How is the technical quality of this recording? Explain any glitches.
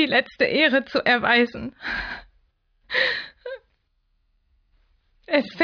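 No glitches or technical faults can be heard anywhere in the recording, and the signal stays intact and continuous throughout.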